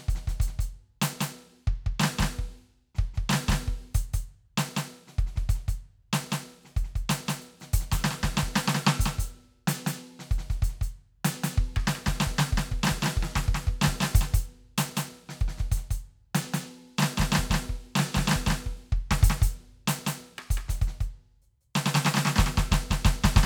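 A music clip with a doubled audio track throughout: a full-band copy trails by about 200 ms, roughly 5 dB quieter, with no decay, likely a second, slower capture path.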